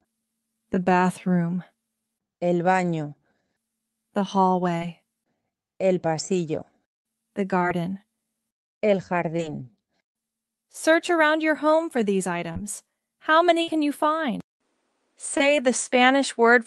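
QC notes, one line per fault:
0.83, 4.79, 7.58, 9.37, 12.52 and 15.37 s: short concealed packet loss. At each point about 20 ms of audio never arrived in time, and the receiver bridged the hole by extending the preceding sound for roughly 20 to 30 ms before blending back. The result is a brief smear or wobble, not a held buzz. At 12.52 s about 11 ms of real audio was also dropped, which tightens the timing slightly.
13.62–13.69 s: burst of packet loss. About 60 ms went missing in one run, several times longer than the single losses. The receiver stretched the last sound across roughly 50 ms and faded it, producing a short held, decaying tail. Playback then resumes slightly further on, so a sliver of the original is simply gone, not smeared over as in the shorter dropouts.
14.40 s to the end: input switched to a poorer device, likely. A gap of about 200 ms of silence marks the change. After it, nothing is heard above about 9.8 kHz, below the 12 kHz ceiling the call codec allowed earlier. 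The level shifts by roughly 5 dB, and a new noise floor appears about 50 dB down. A lasting change in tone, level and background, rather than a momentary glitch, points to a different input, not packet loss.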